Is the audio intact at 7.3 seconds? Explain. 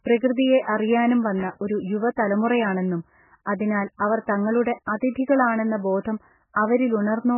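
No. At 7.3 seconds the speech sounds watery and swirly, with nothing above 3 kHz, as it does throughout the clip. This is likely heavy MP3 compression at a bitrate as low as 8 kbps: starved of bits, the encoder drops weak frequency lines frame by frame and cuts off the treble.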